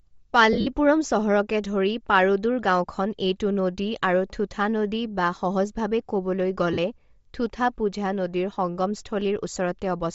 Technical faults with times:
0.00-10.15 Bluetooth LC3 compression
0.53-0.67 lost LE Audio frames
6.73-6.78 lost LE Audio frames
9.54 lost LE Audio frames

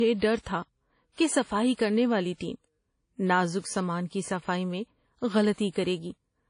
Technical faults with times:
0.00-6.50 low-bitrate audio saved at a high bitrate

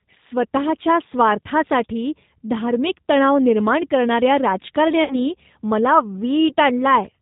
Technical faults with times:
0.00-7.21 G.729 codec
5.04-5.15 VoIP packet loss concealed by the speech codec

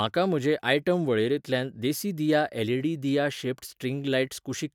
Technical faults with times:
none

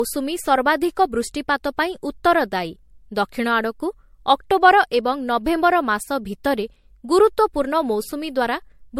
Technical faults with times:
0.00-9.00 generation loss

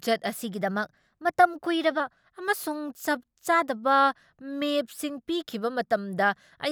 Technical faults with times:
0.40-2.00 drift correction step

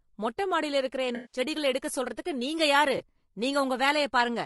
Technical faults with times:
0.00-4.46 low-delay AAC compression
1.15-1.39 AAC frame loss with concealment
2.97-3.03 AAC frame loss with concealment

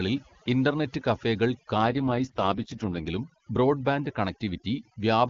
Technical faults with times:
0.00-5.29 overdone noise removal
1.78-3.08 AMR rate drop

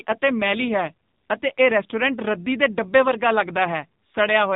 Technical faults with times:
0.00-4.56 AMR narrowband mobile codec

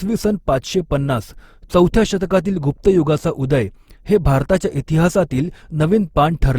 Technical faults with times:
0.00-6.59 generation loss

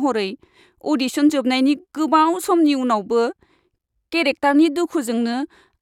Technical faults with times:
none

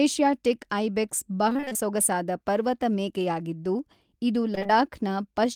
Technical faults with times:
1.49-1.77 repeated packet loss (robotic sound)
4.55-4.71 repeated packet loss (robotic sound)

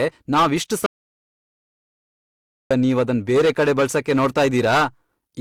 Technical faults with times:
0.00-5.41 hard clipping
0.00-5.41 transcoding between lossy codecs
0.86-2.71 audio dropout to silence

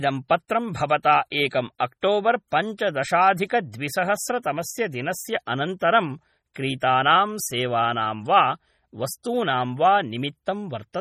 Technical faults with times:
0.00-11.01 MP3 compression

